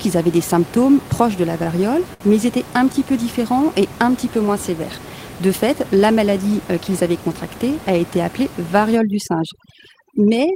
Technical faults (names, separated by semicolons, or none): short stall from a late packet; overdone noise removal